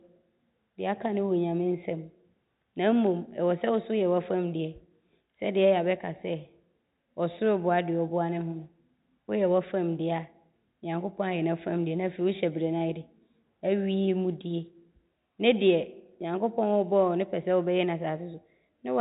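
Nothing here needs flagging, since the speech simply carries the narrow, phone-like sound of G.711 telephone coding with everything above 4 kHz gone, just as that format does.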